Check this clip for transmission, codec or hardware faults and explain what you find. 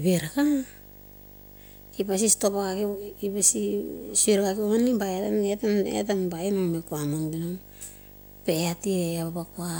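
One hardware fault runs through the whole clip. Video or display buzz, throughout: display circuitry couples into the audio, adding a 50 Hz field-rate buzz, hash and a 15.6 kHz line-rate whine, roughly 20 dB below the speech.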